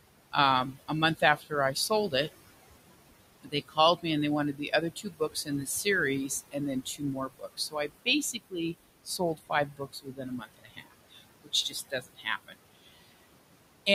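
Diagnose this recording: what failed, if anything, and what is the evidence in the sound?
The failure is in call processing, at the noise suppressor. Noise suppressor artifacts run through the whole clip. The room noise sits about 14 dB below the speech, and the suppressor pulls it down by about 20 dB in the gaps. It works band by band, frame by frame. So the residue swells back under the speech and sinks between phrases.

The same stage also causes speech cut by the noise suppressor. The suppressor mistakes parts of the speech for noise and turns them down with the background. This happens at 0.72 to 2.29 s, at 3.41 to 4.05 s just before "me and they wanted", at 4.53 to 5.86 s just after it, at 6.28 to 8.54 s, and at 9.05 to 13.17 s. The drops reach about 16 to 21 dB. Soft sounds and endings come out swallowed, roughly two seconds in the final stretch alone.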